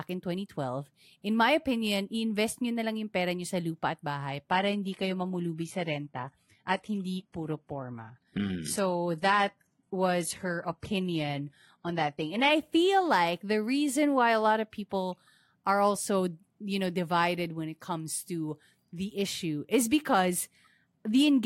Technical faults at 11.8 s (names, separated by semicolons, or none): adaptive stream at a lower bitrate